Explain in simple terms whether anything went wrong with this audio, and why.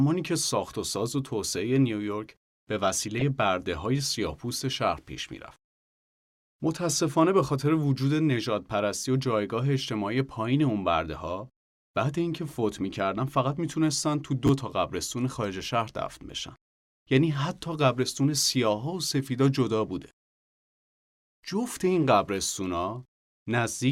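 Two things go wrong in this speech recording.

At 3.19 to 3.22 seconds there is a corrupt frame decoded. The sound is stored in small compressed blocks. Here a couple of blocks were damaged, and the player used them anyway. It read the broken data as real sound. So for a few hundredths of a second you hear a short chirp or blip that does not belong to the speech.

At 14.47 to 14.49 seconds the chunks are out of order. A tiny piece of audio, about 12 milliseconds long, arrived one step late. It was played after the piece that should have followed it. Nothing is missing. The pieces are just swapped. The joins between them are abrupt, so the moment sounds briefly jumbled.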